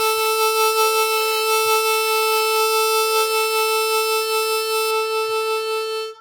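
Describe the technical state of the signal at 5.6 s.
De-emphasis applied wrongly affects the music from 4.91 s to the end of the clip, so it covers 5.6 s. A treble cut meant to undo pre-emphasis was applied where none existed, or applied twice. The top end rolls off smoothly, about 8 dB down at 10 kHz relative to 1 kHz, leaving the sound dull and muffled.

Generation loss is also present at 5.6 s, as it is throughout. The sound is swirly, smeared and hollow, with blurred attacks and nothing above 17.2 kHz. This is likely caused by about five rounds of lossy re-encoding, each quantising on a shifted frame grid so the noise and spectral holes pile up.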